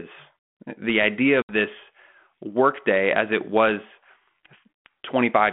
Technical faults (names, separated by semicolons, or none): packet loss on an ADPCM call